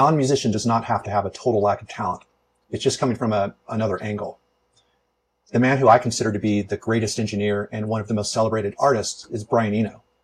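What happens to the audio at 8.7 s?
Nothing goes wrong at 8.7 s; the audio plays through that moment intact, with no dropout, click or other fault.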